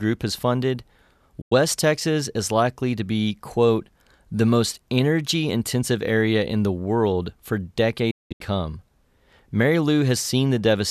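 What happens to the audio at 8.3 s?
Right after "in the world for", a digital broadcast dropout runs from 8.11 to 8.41 s. Failed frames make the receiver mute within 8 ms, losing 264 ms of sound in holes, the longest 192 ms. These show as flat waveform gaps and blank spectrogram columns.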